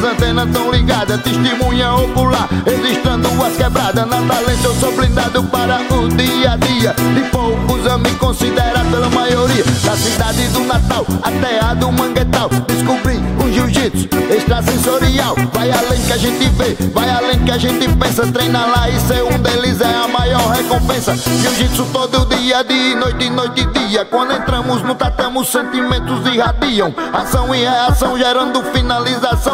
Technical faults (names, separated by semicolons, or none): none